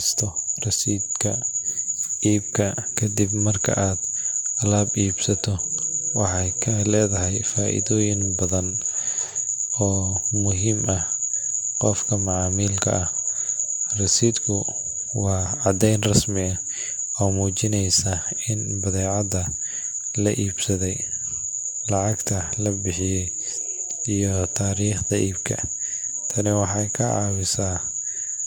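Throughout, swirly, hollow speech and blurred onsets point to generation loss, likely about four AAC-LC re-encodes; the spectrogram shows flickering holes and nothing above 17 kHz.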